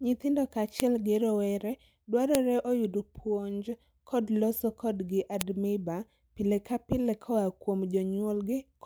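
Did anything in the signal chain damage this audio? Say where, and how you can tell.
Yes, at the storage or file-joining stage: file header played as audio. Sharp clicks at 0.80 s (just before "gi rowere"), 2.35 s (before "oyud puonj kod loso") and 5.41 s (after "puonj kod loso kodgi") mark spliced WAV pieces whose header bytes were decoded as samples.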